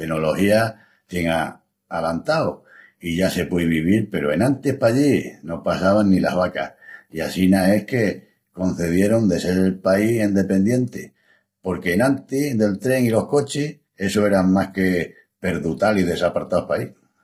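Low-delay AAC compression affects the entire speech clip and is heavy. The speech sounds rough and grainy, with noise between the pitch harmonics and a synthetic upper band. The likely cause is AAC-ELD, whose short frames resolve harmonics poorly, at a rate fitting about 24 kbps.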